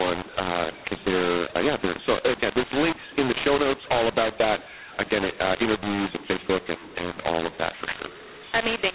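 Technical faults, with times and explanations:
Throughout: mu-law and A-law mixed up. The speech was coded as G.711 mu-law but decoded as A-law. Each 8-bit code lands at the wrong point on the other logarithmic curve, so levels are scrambled, speech turns harsh and distorted, and pauses fill with noise.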